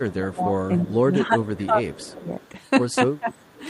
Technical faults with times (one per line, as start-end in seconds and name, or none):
0.02-2.33 speech suppressed in double talk
1.92-2.06 echo leak
2.40-2.49 echo leak
3.19-3.35 speech suppressed in double talk
3.31-3.63 echo leak